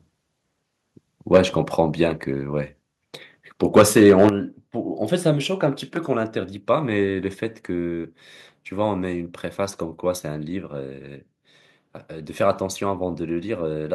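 At 1.34 to 1.39 s the speech overloads: waveform peaks are flattened, giving a brief harsh crackle on a loud syllable. This is microphone overload, likely from input gain set about 6 dB too high for the converter, so about 7 percent of samples in that stretch are clipped flat. Partway through, at 1.37 s, the level drops suddenly by about 4 dB. The microphone volume stepped down in one jump, likely the call software reducing device input gain after detecting the clipping. Voice and background fall together.

From 3.76 to 4.28 s a longer overload follows. The loudest passages carry a rough, gritty edge, likely from peaks about 7 dB over the converter's limit, with roughly four percent of samples clipped across the half second. At 4.29 s the input steps down again, this time by 8 dB. The drop is an abrupt fall in loudness of both speech and room sound, likely a larger corrective gain cut in response to the repeated clipping.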